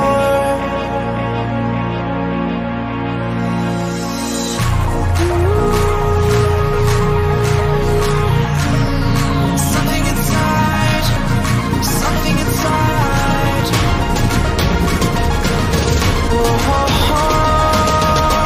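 No technical faults can be heard at any point, so there are none to describe in time order.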